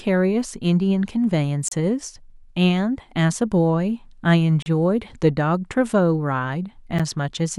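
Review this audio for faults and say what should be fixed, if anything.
Gaps at joins of encoded pieces appear at 1.68 to 1.72 s (32 ms), 4.62 to 4.66 s (36 ms) and 6.99 s (11 ms). The speech drops into silence with smeared edges, then resumes where it stopped. The silence comes from encoder start delay and last-frame padding left in at each splice. To prevent this, trim the encoder delay and padding from each piece before joining, or encode the whole recording as one continuous stream.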